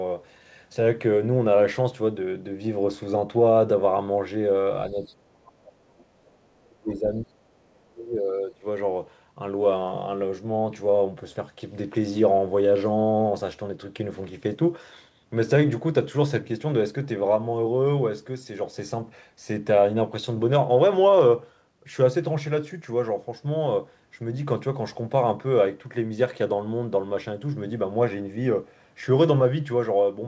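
From 4.91 to 5.82 s the speech collapses in pieces by as much as roughly 40 dB, likely speech suppressed in double talk, with the echo canceller ducking both talkers at once. The waveform shows chopped, hollowed gaps. From 5.98 to 6.05 s, other side's voice leaking through appears as a faint scrap about 35 dB below the speech, likely echo the canceller left in. On the spectrogram it is a thin smear. From 6.12 to 8.64 s, the same double-talk suppression likely returns, cutting the speech by up to about 35 dB across roughly two seconds. The spectrogram energy fades and breaks up beneath the call path's 8 kHz ceiling.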